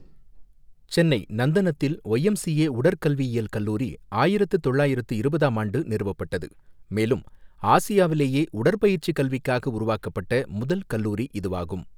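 No technical faults can be heard in the speech at any point.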